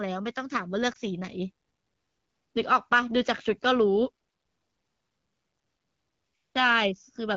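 At 0.94 to 0.97 s there is a brief dip or warble in the speech. This is a lost AMR speech frame. The decoder filled the gap by repeating the last good pitch and vocal tract settings at lowered gain. The short gap fits a single missing 20 ms frame, heard within otherwise wideband-coded speech.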